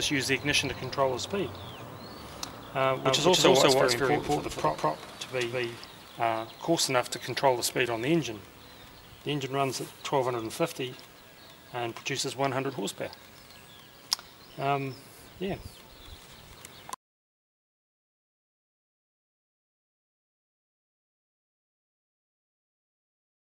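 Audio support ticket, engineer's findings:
Second capture path or out-of-step edit, likely, mixing the same audio in twice. Doubled audio track, 3.06–5.86 s: full-band copy trails by roughly 200 ms at near-equal level, no decay or room colour, starting and stopping abruptly.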